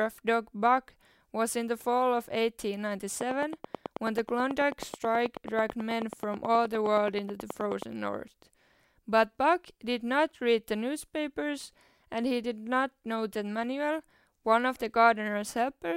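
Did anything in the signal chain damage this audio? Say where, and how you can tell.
Yes. A train of clicks runs from 3.21 to 7.83 s, with around forty sharp, near-identical ticks at a steady 9.3 per second, also audible in the pauses of the speech and peaking roughly 10 dB above it. The identical shape and clockwork spacing point to an outside pulse source rather than anything in the speech. The likely stage is the analogue wiring, where nearby equipment's periodic interference was picked up before conversion.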